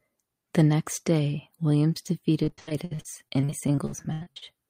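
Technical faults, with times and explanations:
2.43–4.43 s, repeated packet loss (robotic sound): the speech breaks up into about 22 short holes, the longest around 83 ms. Roughly 740 ms gets patched by stretching the last bit of sound and about 760 ms simply drops out, hence that choppy, robotic quality.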